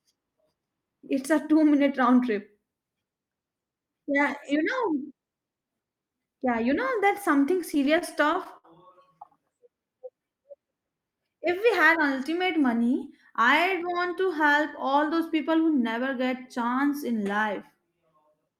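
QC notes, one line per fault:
7.61–8.66 s, repeated stalls (stutter): packets kept arriving late, so the jitter buffer ran dry seven times and the receiver stretched the last sound across each gap, the longest 64 ms, filling 144 ms in all. Nothing drops out, but the speech catches and stutters.
9.84–10.59 s, jitter buffer slow-down: with the buffer running low, the receiver repeated single pitch periods to rebuild its reserve, adding 67 ms. Speech plays at 92% speed with unchanged pitch, so sounds come out drawn-out.
12.57–14.13 s, jitter buffer speed-up: the buffer held more audio than its target, so the receiver cut short pitch-period pieces, removing roughly a tenth of a second. Speech runs at 106% speed at the same pitch and sounds slightly hurried.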